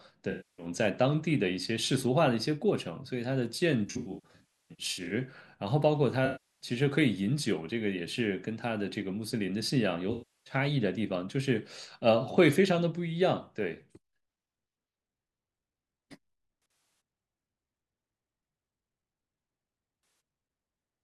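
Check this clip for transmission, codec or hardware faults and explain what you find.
The speech suffers AAC frame loss with concealment six times. Frames go missing and the decoder rebuilds them from the last good spectrum, leaving smeared, noisy, phasey patches.

At 0.30 to 0.66 s, about 0.28 s of audio is lost in one run and comes back as a smeared wash.

From 3.87 to 5.12 s, losses totalling about 0.81 s are scattered over 1.24 s, with the longest gap around 0.3 s. This makes a stretch of repeated noisy, phasey smearing.

At 6.25 to 6.67 s, about 0.34 s is lost and concealed as a continuous blurred patch.

At 10.12 to 10.54 s, another 0.34 s loss produces the same blurred, phasey fill.

From 16.62 to 17.00 s, about 0.21 s of losses are spread over 0.38 s in runs up to roughly 70 ms, giving brief flickering smears.

At 20.03 to 20.20 s, a 0.17 s loss leaves a short noisy smudge.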